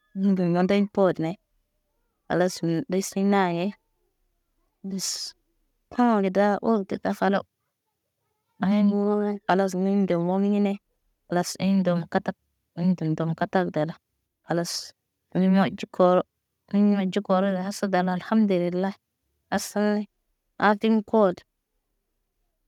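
No technical faults are audible anywhere in this speech recording.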